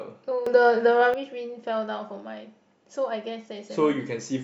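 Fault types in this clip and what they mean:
Sudden gain jump: from 0.46 to 1.14 s the speech and its background noise leap about 11 dB louder together, likely a level setting applied without a ramp.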